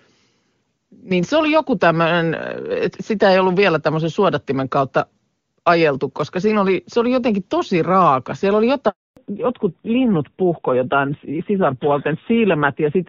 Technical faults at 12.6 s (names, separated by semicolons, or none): fallback to narrowband